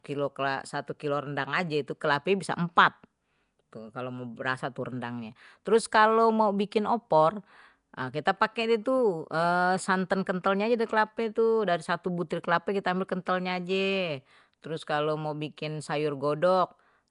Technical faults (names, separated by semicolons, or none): Nellymoser compression